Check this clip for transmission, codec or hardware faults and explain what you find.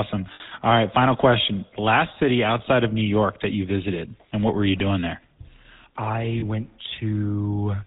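Two faults are present: GSM full-rate coding throughout, and two brief dropouts of lost GSM frames.

The GSM full-rate codec affects the whole clip. This early codec models the vocal tract and feeds it a sparse train of regularly spaced pulses, keeping only every third excitation sample. Nothing above 4 kHz survives. The result is a buzzy, gravelly roughness on the speech that is plainly audible. The sound fits the 13 kbps full-rate mode.

Lost GSM frames occur twice. The first runs from 0.34 to 0.41 s, about 60 ms, which fits three lost 20 ms frames. The second runs from 6.40 to 6.44 s, about 20 ms, which fits a single frame. In each gap the decoder repeats the last good frame's settings. The speech briefly freezes into a rough, metallic ring. Both gaps are too short to fade fully to silence.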